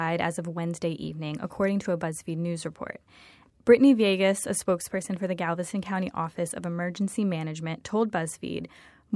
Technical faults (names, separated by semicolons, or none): none